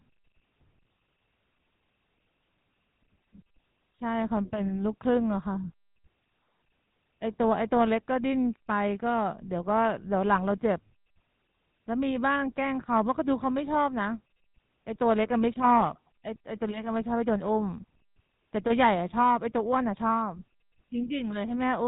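From start to finish the speech carries GSM full-rate codec damage, plainly audible throughout. The codec rebuilds the voice from a vocal-tract model excited by sparse regular pulses, at a rate fitting 13 kbps, so everything above 4 kHz is gone and the voice turns buzzy and gravelly.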